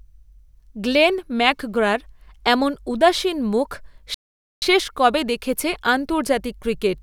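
Speech with a playback stall: the sound halts mid-flow from 4.14 to 4.62 s, roughly 475 ms of flat-line waveform and an empty spectrogram column, likely from the player starving for data.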